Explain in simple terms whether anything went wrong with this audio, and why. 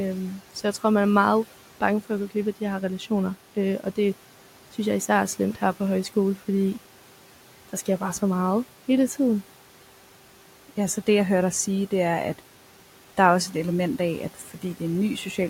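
Noise suppressor artifacts run through the whole clip. A filter keeps turning down whatever it judges to be steady background noise, moment by moment. So the faint room noise drops away in pauses and returns under the talking.

There is also speech cut by the noise suppressor, between 14.34 and 14.79 seconds, right after "et element af at". Here the filter mistook part of the talking for noise and turned it down. Roughly a fraction of a second of sound comes out faint or swallowed.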